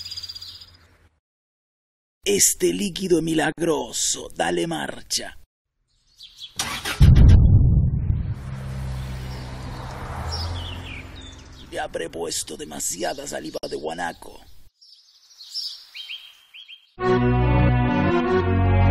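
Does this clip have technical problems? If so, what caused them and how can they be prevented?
Yes. The sound drops out abruptly for about 55 ms at 3.52 to 3.58 s and again at 13.58 to 13.63 s, then resumes exactly where it stopped, with softened edges. This is a gap at a join of encoded pieces. The audio was encoded in separate 10-second segments, and each segment's encoder start-up delay and end padding were left as silence at the joins. To prevent it, trim encoder delay and padding (gapless metadata) before concatenating, or encode the audio as one continuous stream.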